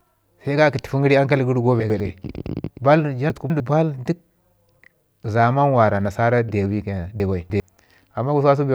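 Three moments of chunks out of order break up the speech at 1.8–2.0 s, 3.3–3.6 s and 7.2–7.6 s. Each time a 100 ms block plays late, after one, two and then three of the blocks that should follow it, so the jumbled stretch lengthens each time. Nothing is missing or repeated, which separates this from a dropout or a stutter. The sound is shuffled, with three hard joins each time.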